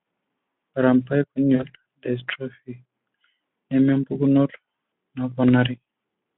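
Speech, with one glitch at about 1.55 to 1.64 s: VoIP packet loss concealed by the speech codec. About 40 ms went missing, which fits two lost 20 ms frames, and the decoder stretched the last sound into a buzzy tone or coloured noise that faded before it caught up, all on a lightly coded Speex phone-band line.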